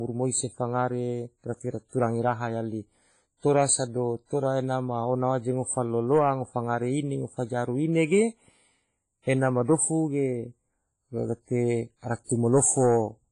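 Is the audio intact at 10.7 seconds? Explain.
No. At 10.7 seconds, as across the whole clip, the speech sounds washy and ringing, with hiss that swells and fades with the signal and nothing above about 10.1 kHz. The likely cause is heavy WMA compression, which fits a bitrate around 24 kbps, spreading quantisation noise over long blocks and zeroing weak components.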